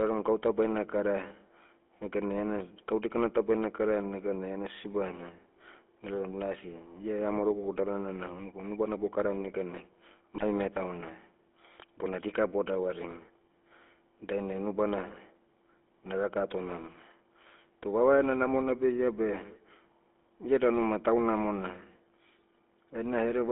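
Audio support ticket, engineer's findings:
Buzzy, gravelly speech throughout, band limited to roughly 250 Hz to 3.5 kHz. Probable component: GSM full-rate codec. Pulse-train excitation with decimated residual coarsens voicing. Audible damage fits a 13 kbps vocoder.

Squawk and gargle burst at 10.35 to 10.44 s. Probable component: radio link, GSM bit errors. Flipped bits corrupt filter, pitch and gain parameters, distorting spectrum and level over about 0.09 s, consistent with several consecutive bad frames.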